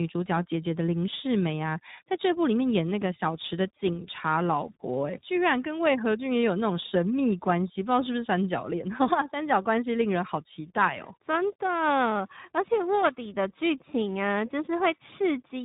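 Tandem speech coding runs through the whole speech clip: the audio was decoded and re-encoded across a CVSD link, G.711 A-law and finally iLBC at 15.2 kbit/s, each coder compounding the previous one's damage, leaving rough, muffled, warbly speech.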